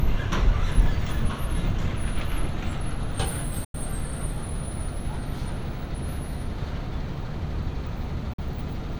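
Everyday sounds, with two short gaps of silence. The first runs from 3.64 to 3.75 s and drops about 93 ms of audio. The second, from 8.33 to 8.39 s, loses about 46 ms. The sound then resumes further along, as if it had kept playing. This is likely a Bluetooth dropout, with packets reaching the headphones too late. The gap lengths fit roughly four and two lost packets.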